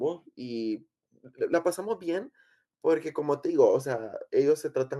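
A short speech recording, with no technical faults to be heard. Nothing in the audio points to a problem in how it was captured, processed or delivered.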